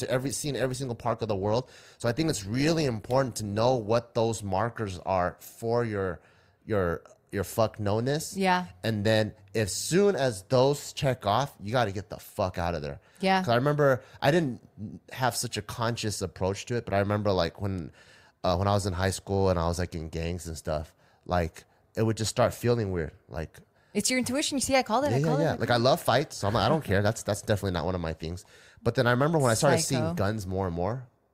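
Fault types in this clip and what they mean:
Adaptive stream starting at a low bitrate: the player opened on a lean version of the stream, one that fits Opus at around 24 kbit/s, until it had measured the connection. The speech sounds dull and smeared for the first 4.0 s, then brightens abruptly without a gap around "those markers are for".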